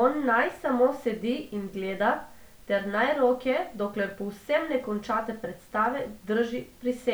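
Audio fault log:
No technical faults can be heard anywhere in this speech recording, and the signal stays steady and intact throughout.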